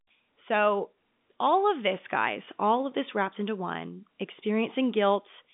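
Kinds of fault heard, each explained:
Nothing stood out on listening to this telephone-band speech.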